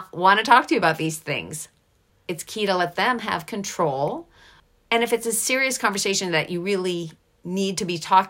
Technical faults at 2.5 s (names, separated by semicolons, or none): none